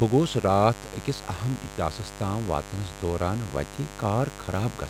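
Mains buzz runs throughout this speech, a steady raspy 50 Hz-based buzz about 15 dB below the speech, its switching-spike harmonics reaching into kilohertz, unlike a smooth pure hum.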